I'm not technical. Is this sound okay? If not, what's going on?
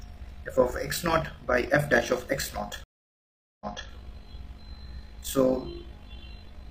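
No. There are two problems.

The first runs through the whole clip. It is overlap-add ripple. The audio was chopped into short, overlapping slices and glued back together. The overlaps don't blend evenly, so the loudness dips and swells with every slice, about fifty times a second. You hear it as a fast, buzzy flutter, a bit robotic. It never stops.

The second is a stream reconnect, from 2.84 to 3.89 seconds. The connection dropped, and the audio goes silent for about 0.77 seconds. Then the player reconnected and started playing again. But it picked up slightly in the past, so about 0.28 seconds of sound you already heard plays again. That makes a small jump backwards right after the gap.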